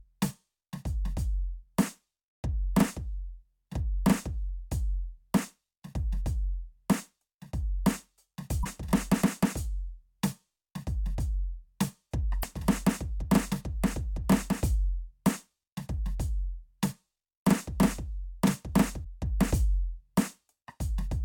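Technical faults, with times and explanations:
8.61–8.67 s and 12.40–12.45 s: damaged data in a compressed stream. The music breaks twice into a short glitch, each lasting roughly 56 ms. Part of the compressed stream is wrong here. Bytes were lost, zeroed or overwritten. The decoder cannot read those frames correctly and loses sync. It outputs garbled sound until it finds the next valid frame header.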